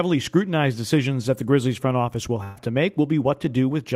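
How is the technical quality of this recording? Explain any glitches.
There is one glitch in the speech. A burst of packet loss at 2.43–2.57 s, after "front office will": about 120 ms never arrived, so the last sound is stretched into a fading tail, then speech jumps ahead.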